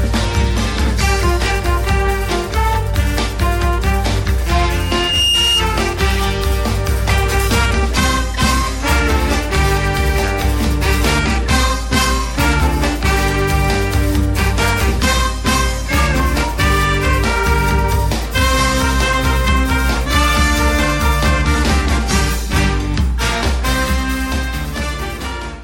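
At 4.79 s a loudspeaker feedback squeal takes off: a single tone near 2.8 kHz swells over roughly 0.4 seconds until it's about as loud as everything else. The mic was hearing its own speaker and the loop gain went past one at that pitch. It cuts out at 5.66 s.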